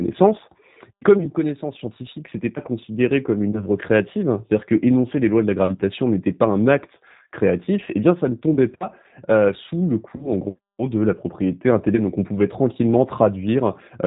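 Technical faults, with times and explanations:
Throughout: G.729 codec. The audio is limited to below 4 kHz and sounds rough and slightly synthetic, which fits 8 kbit/s coding that rebuilds speech from a vocal tract filter, a pitch predictor and sparse pulses. Unlike plain low-pass filtering, the texture itself is grainy.
3.51–3.66 s, 8.54–8.59 s and 10.16–10.30 s: VoIP packet loss concealed by the speech codec. Each gap, which fits one lost 20 ms packet, is bridged by the decoder repeating its last pitch and filter at falling gain. The result is a brief, fading smear rather than silence or a click, and the sound stays weak or distorted for a while after each one.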